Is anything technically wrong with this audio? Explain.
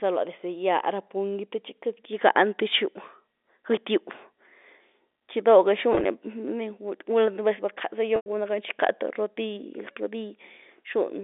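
Yes. Packet loss with pitch repetition occurs at 5.93 to 6.05 s, where 60 ms of scattered gaps across 120 ms (runs up to 20 ms) are bridged by repeating the last pitch period, giving a brief buzzy hold. At 8.16 to 8.26 s, a 100 ms loss repeats, fades over about 50 ms into silence, then cross-fades back. On a spectrogram, frozen identical harmonic slices appear. The waveform shows copied cycles shrinking to a flat gap. The G.711 telephone band, 250 Hz to 3.6 kHz, sounds as expected.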